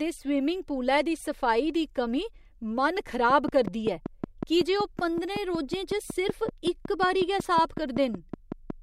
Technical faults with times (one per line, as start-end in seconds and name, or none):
3.30-8.71 train of clicks